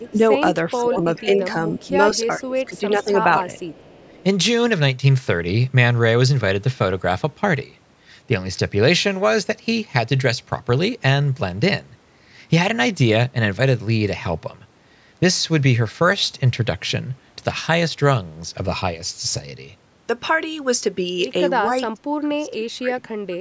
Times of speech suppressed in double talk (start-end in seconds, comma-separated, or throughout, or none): 0.00-0.22, 0.81-3.45, 21.66-23.12